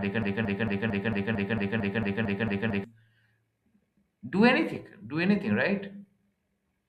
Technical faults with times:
0.00-2.84 broken-record loop

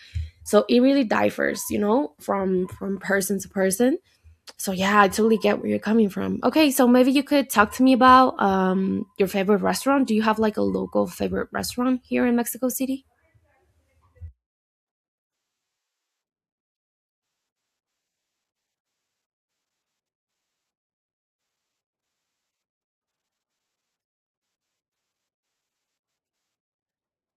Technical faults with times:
none

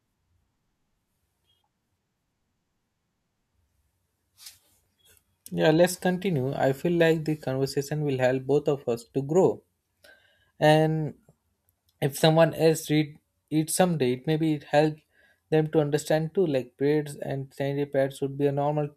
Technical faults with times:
4.86 audio missing between chunks

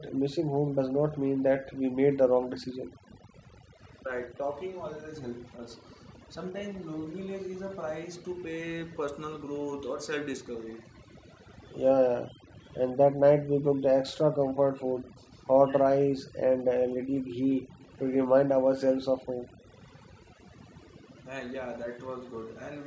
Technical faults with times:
0.00-22.86 overdone noise removal
4.02-5.61 speech suppressed in double talk
5.48-7.13 echo leak
8.15-8.96 echo leak
10.66-12.92 echo leak
14.43-15.83 echo leak
17.52-18.15 echo leak
19.62-21.25 echo leak

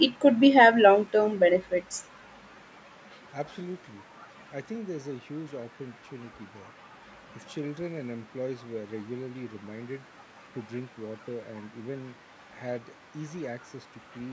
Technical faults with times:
none

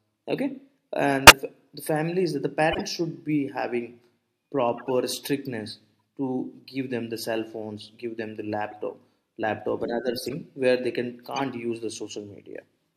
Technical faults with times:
1.27-1.33 corrupt frame decoded
2.71-2.81 corrupt frame decoded
4.78-4.87 corrupt frame decoded
6.00 corrupt frame decoded
8.71-8.73 corrupt frame decoded
10.16-10.34 corrupt frame decoded
11.35-11.41 corrupt frame decoded

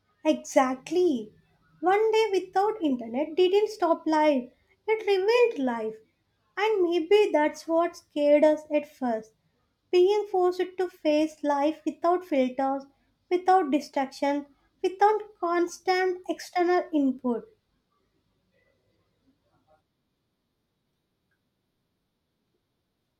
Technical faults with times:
none

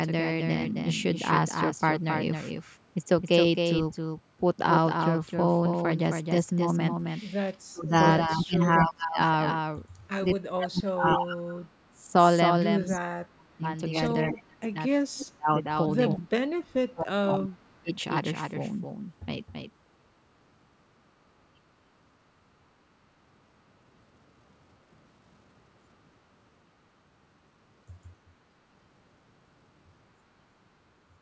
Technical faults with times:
0.00-31.21 doubled audio track
7.60-7.94 speech suppressed in double talk
8.26-9.19 speech suppressed in double talk
10.43-12.04 speech suppressed in double talk
12.97-13.66 speech suppressed in double talk
14.24-14.76 speech suppressed in double talk
15.07-15.26 echo leak
15.25-15.68 speech suppressed in double talk
16.15-17.91 speech suppressed in double talk

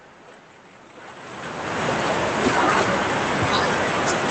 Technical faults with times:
none

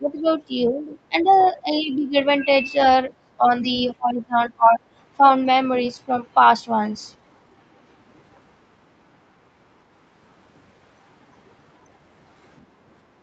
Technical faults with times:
0.00-0.27 speech suppressed in double talk
0.67-1.32 speech suppressed in double talk
1.21-1.59 other side's voice leaking through
1.60-2.15 speech suppressed in double talk
3.19-3.44 speech suppressed in double talk
3.98-4.79 speech suppressed in double talk

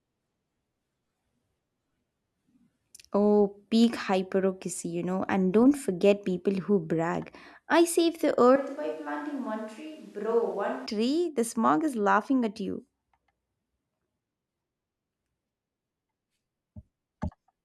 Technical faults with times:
8.56-10.86 switch to a distant microphone

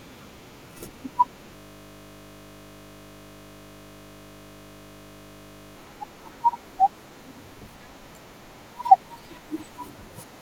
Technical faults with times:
1.56-5.76 system hang loop

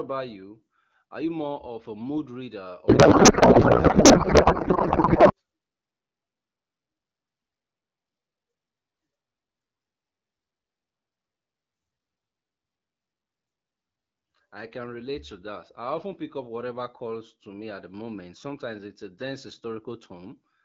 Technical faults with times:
2.88-5.33 codec payload misread

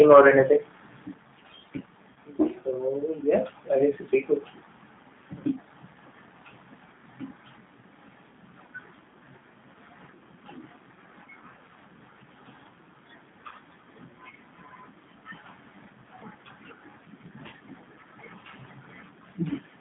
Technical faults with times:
0.00-19.80 G.729 codec
0.00-0.28 microphone overload
2.13-2.17 VoIP packet loss concealed by the speech codec
13.48-13.53 VoIP packet loss concealed by the speech codec

